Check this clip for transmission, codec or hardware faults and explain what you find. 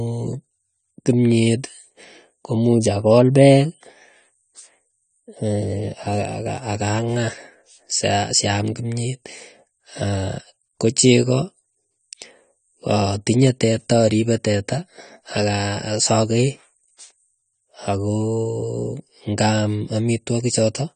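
The clip has one codec fault, running from start to finish: AAC compression, plainly audible, most likely AAC-LC at a low bitrate. Nothing reaches above 9 kHz, so the speech sounds dull, and sibilants and sustained vowels have a warbling, fizzy texture. This fits a coder with too few bits, around 32 kbps, that drops and coarsely quantises spectral detail frame by frame. A simple low-pass filter would also dull the sound, but it would not add this shifting, swirly grain.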